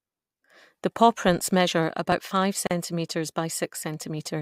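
At 2.67 s, just after "pawprints measure about five", the speech stops dead for about 38 ms and resumes at 2.71 s. This is a gap at a join of encoded pieces. The clip was encoded in separate sections and spliced without trimming. The encoder's start-up silence and the padded final frame stayed in. The result is a short hole with smeared edges. The speech then continues exactly where it broke off.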